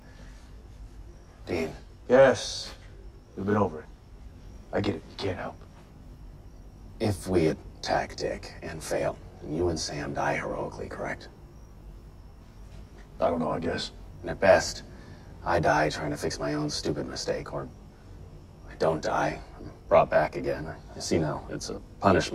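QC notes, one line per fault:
Throughout: channel delay (comb filtering), one channel roughly 20 ms late, summed to mono; fixed notches from about 30 Hz sound rough or slightly doubled, never sweeping like flanging.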